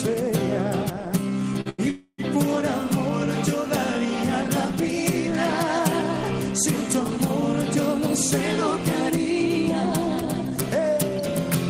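Short stalls from a late packet occur at 1.61 to 1.67 s and again at 1.69 to 1.80 s. Each time the next packet had not arrived when it was due, so the jitter buffer ran dry. The receiver held the last bit of sound for 45 ms and then 90 ms until the packet came in, and then resumed at the same point. No audio is lost. Instead a sound drags on too long with a faint buzz or dip, and the playback falls a further 45 ms and then 90 ms behind.

A call audio freeze follows from 1.90 to 2.20 s. The sound stops moving forward and turns into a sustained buzz or hiss that fades out, finishing in about 50 ms of silence. This fill runs for 280 ms in total. It is likely caused by packets being held up in transit, which drained the jitter buffer again. When the sound resumes it continues from where it froze, so nothing is missing, but a 280 ms gap has been inserted into the timeline.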